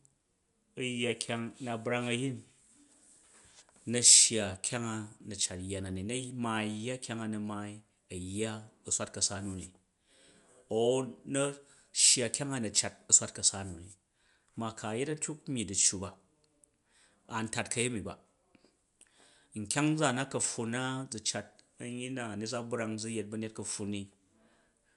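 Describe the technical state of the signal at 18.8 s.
At 18.8 s the speech signal is intact, with no audible dropout, glitch or distortion.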